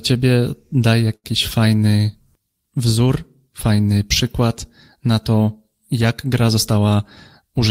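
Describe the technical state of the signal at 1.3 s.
Just before 1.3 s, from 1.15 to 1.27 s, there is a short stall from a late packet: the jitter buffer ran dry and the last sound was stretched for 84 ms, giving a held sound with a slight buzz or dip. Unlike a lost packet, nothing is skipped; the speech resumes from the same point, 84 ms later.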